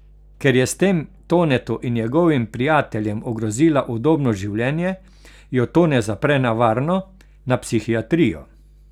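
A ground loop or nearby transformer is leaking the 50 Hz power line into the signal path for the whole of this speech clip. The result is mains hum, a steady low drone with some low harmonics, sitting roughly 30 dB below the speech.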